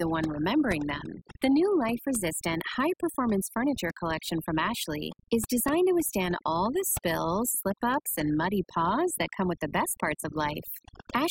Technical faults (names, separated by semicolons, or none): overdone noise removal